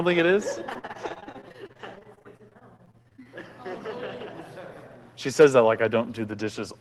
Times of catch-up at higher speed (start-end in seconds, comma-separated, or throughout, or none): none